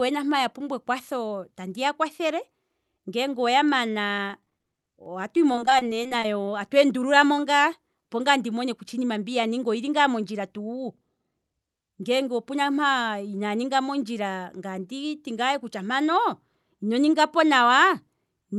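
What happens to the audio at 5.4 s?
At 5.4 s the speech turns choppy and robotic, with a stuttering texture and small pieces missing. This is repeated packet loss, running from about 4.08 s to 6.48 s and clearing just before "tatu endululamo". Dozens of brief dropouts, each up to about 20 ms (which fits 20 ms packets), were patched by stretching the preceding sound forward. Because the holes arrive in quick succession, those repeated fills produce the robotic, mechanical quality.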